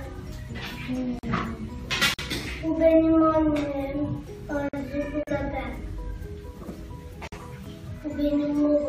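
The sound is interrupted in five places, each time for about 40 to 50 milliseconds. Two of these holes are gaps at a join of encoded pieces. They fall at 1.19 s, lasting 44 ms, and at 5.23 s, lasting 40 ms, four seconds apart. The pieces were encoded separately and then butted together untrimmed. The encoder's start-up silence and final-frame padding stayed in. Their edges are smeared by the codec, and the sound resumes exactly where it left off. The other three are gaps between chunks, at 2.14 s, 4.69 s and 7.28 s. Each is a 48 ms hole. They arrive at a steady spacing that fits audio delivered in 2.5 s chunks, with silence left at every join. Nothing is lost from the sound itself. It is simply interrupted at each boundary.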